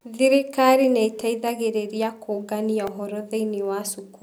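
A tiny click lands at 1.21 s in the speech, and a slightly longer, buzzier tick at 2.87 s. Both are repeated buffers. New audio missed its deadline, so the output replayed its most recent block instead: once at 1.21 s and twice in a row at 2.87 s, with a hard seam at each repeat. The block is only 1.33 ms long, which fits a 64-sample buffer. That is too short to sound like a stutter, and essentially no audio is lost.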